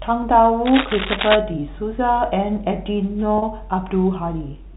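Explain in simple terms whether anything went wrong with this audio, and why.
From 0.65 to 1.42 s, a rough scratching rustle, about as loud as the speech, sits over it: cable scratch noise, likely from a worn cable or connector being moved.

At 3.38 to 3.42 s, the speech briefly holds on a buzzy tone. That is packet loss with pitch repetition: 40 ms went missing, which fits two lost packets, and the last bit of sound was repeated to fill the gap.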